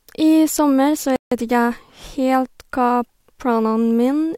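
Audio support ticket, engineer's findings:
Speech cuts to dead silence mid-flow at 1.16 s, gap runs to 1.32 s, about 156 ms, then audio resumes. Playback stall. Likely cause: player-side underrun, output buffer drained faster than data arrived, or render/decode thread blocked, so nothing was written to the device until recovery. Check buffer depth, thread scheduling and I/O latency around that timestamp.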